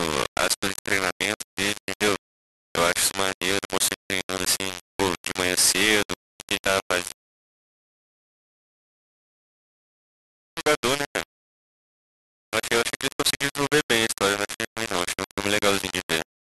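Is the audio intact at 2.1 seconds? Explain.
No. Low bit depth without dither runs through the whole clip, including 2.1 s, likely from rounding to very few bits, around 3. The error tracks the speech, leaving a harsh, grainy distortion only slightly quieter than the speech itself.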